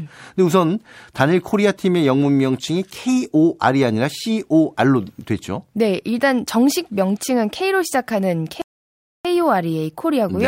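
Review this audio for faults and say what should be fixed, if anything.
A rebuffering stall runs from 8.62 to 9.25 s: the player drains its downloaded speech, drops to silence for about 0.63 s while waiting for data, then resumes at the exact point it stopped, so nothing is lost but time is added. Fix it with a larger playback buffer or adaptive bitrate switching that keeps download ahead of playback.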